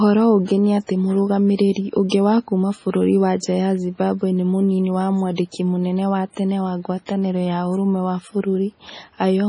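MP3 compression runs through the whole clip. Nothing above 10.5 kHz, so the speech sounds dull and closed-in. Weak frequency lines drop in and out from frame to frame, giving a watery, swirling texture, with metallic chirps on s sounds and smeared consonant attacks. The damage is heavy and fits a low bitrate around 24 kbps. The likely cause is an MP3 encoder short of bits, cutting the treble at a fixed point and zeroing quiet detail.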